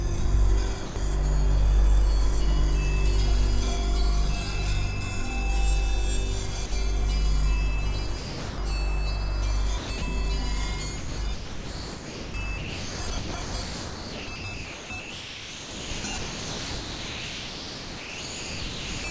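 At 0.86 to 0.96 s, 6.66 to 6.72 s and 8.18 to 8.58 s, the sound gives way to steady hiss for 100, 60 and 400 ms. The likely cause is sound dropped by the voice detector, with comfort noise filling each gap. On a spectrogram these gaps show as flat, featureless noise where the harmonic detail disappears.

From 9.78 to 10.02 s, and then from 10.98 to 19.04 s, the sound turns choppy. This is likely sound chopped by the voice detector. About 160 ms and 6.9 s respectively are replaced by comfort noise, so the waveform flickers between real structure and smooth synthetic noise, all cut off at 8 kHz by the call codec.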